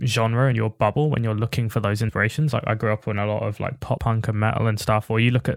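At 0.51 s, 2.08 s and 3.96 s the speech jumps forward where compressed frames were skipped, either missing from the stream or discarded by the decoder as corrupt. The gaps are about 30 ms, 70 ms and 50 ms, consistent with losing roughly one, three and two frames of about 26 ms each. Because adjacent frames overlap, each join is heard as a short smeared blip in the speech rather than a sharp click.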